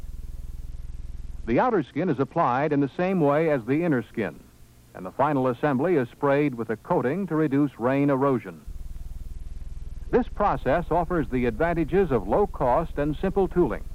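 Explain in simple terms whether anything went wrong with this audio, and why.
Yes, something went wrong twice: a Bluetooth SBC bit pool drop, from 0.69 to 3.09 s and again from 9.34 to 10.54 s. The wireless link got congested, so the sending device cut back how much detail it packed into each slice of audio to keep it playing. The highest frequencies were dropped and the rest coded roughly, so during those stretches the sound turns dull and muffled with a gritty, grainy edge, then clears once the link recovers.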